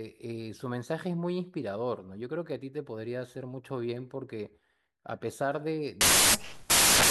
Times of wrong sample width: 6.01-7.10

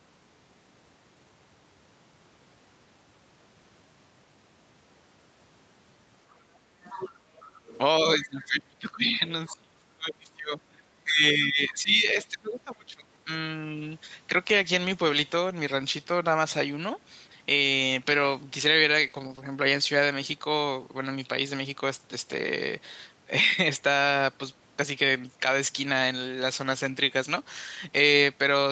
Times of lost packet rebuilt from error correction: 21.45-21.47

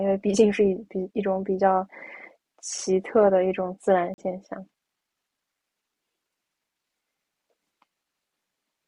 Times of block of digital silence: 2.78, 4.14-4.18

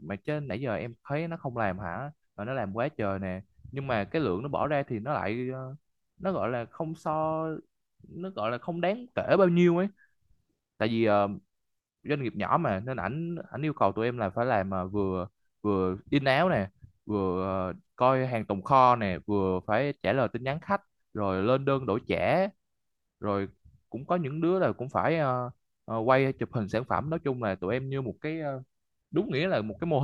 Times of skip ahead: none

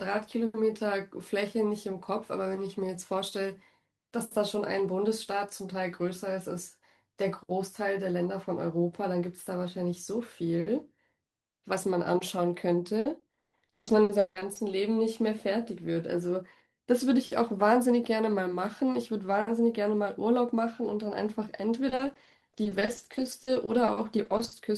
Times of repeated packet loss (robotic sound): 12.99-14.71, 21.89-24.59

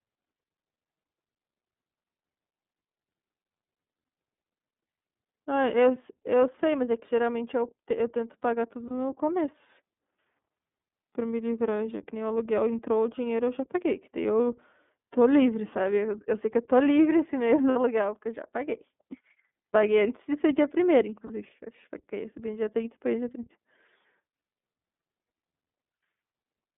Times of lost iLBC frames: 8.88-8.91, 17.70-17.77, 21.26-21.31

